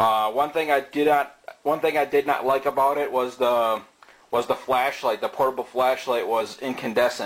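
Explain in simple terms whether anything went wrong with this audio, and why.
Damaged data in a compressed stream causes a brief glitch from about 6.37 to 6.42 seconds, near the end of the clip. The audio was stored in compressed form, and a small stretch of that stored data was corrupted. When playback reached it, the decoder could not read those bytes properly, lost its place, and had to hunt for the next valid chunk. That stumble comes through as a short, unnatural blip.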